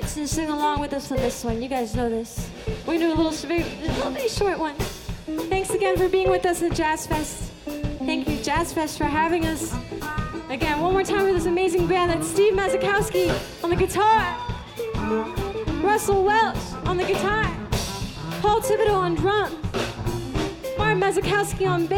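At 0.77 to 0.79 s there is a brief disruption, a chirp, squawk, click or short hole in the audio, caused by damaged data in a compressed stream: corrupted bytes there left the decoder unable to read those frames, so it lost sync and had to find the next valid frame header.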